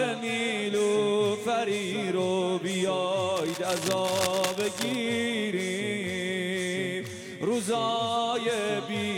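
A worn cable, connector or control was likely being moved from 3.36 to 4.95 s, its contact resistance jumping rapidly. That produces cable scratch noise: dense, uneven bursts of scratching and rustling laid over the sound, sitting roughly 10 dB below it.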